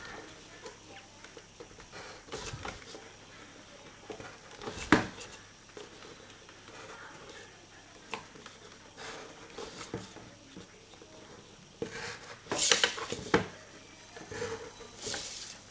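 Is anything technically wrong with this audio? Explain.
No, nothing stood out as technically wrong on listening; the audio has the sound of a call link, with nothing above 8 kHz, which fits a wideband codec such as G.722.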